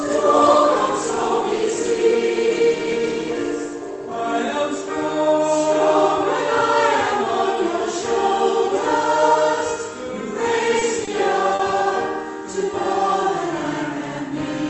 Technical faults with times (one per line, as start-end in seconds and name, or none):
10.79-11.09 short concealed packet loss
11.55-11.61 short concealed packet loss